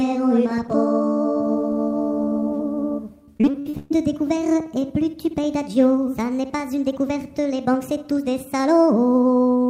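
Repeated packet loss (robotic sound) runs from 3.25 to 3.92 s. A quick series of dropouts, the longest about 130 ms, is patched by stretching the preceding sound, so nearly half that span is synthetic fill and the audio turns choppy.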